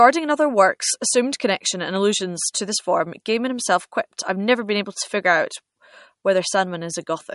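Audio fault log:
Throughout, MP3 compression: an MP3 encoder likely ran short of bits, fitting a bitrate near 48 kbps, so it cut everything above 11.2 kHz and let weak frequency lines flicker on and off between frames, leaving the speech dull, watery and swirly.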